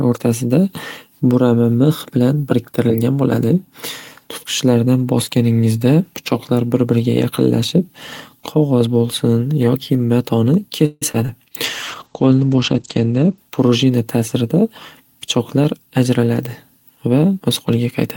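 Speech with a cluster of call-transport faults in its second half. From 10.85 to 11.03 s a call audio freeze stretches the last sound into a fading buzz. That is likely the jitter buffer running empty while packets were held up. On a spectrogram it shows as a smeared, flattened continuation with about 10 ms of silence before the speech resumes intact, 161 ms later. Short concealed packet loss follows at 11.11 to 11.16 s and 11.26 to 11.30 s: each 20 ms hole is patched with synthesised continuation, heard as a brief smear or wobble and seen as a blurred vertical sliver. A call bitrate drop runs from 11.65 to 14.15 s, with the encoder falling from 32 to 11 kbps for about 1.2 s at its lowest. The sound turns muffled and watery, and the spectrogram shows everything above 8 kHz abruptly vanishing from the previous 20 kHz. Jitter buffer speed-up then trims pitch periods from 13.72 to 14.62 s at 107% speed and from 15.27 to 16.18 s at 106%, removing roughly 70 ms and 50 ms. 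The speech sounds hurried at unchanged pitch, with syllables compressed in time on the waveform.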